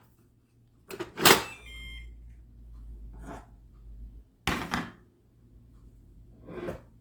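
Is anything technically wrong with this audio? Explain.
Yes, there's plainly audible damage all the way through: tones come out grainy, rough and noisy rather than clean, with little swirl. That's likely Opus compression in its CELT music mode, starving for bits, which fits roughly 24 kbps, and filling bands with folded or noise content while keeping the full bandwidth up to about 20.2 kHz.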